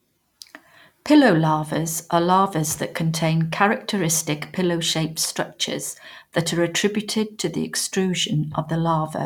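No technical faults can be heard anywhere in the speech, so there is nothing to place in time order.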